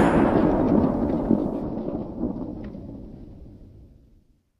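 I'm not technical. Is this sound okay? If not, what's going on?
Yes, this one's fine: nothing in it points to any technical trouble, so you can relax about it.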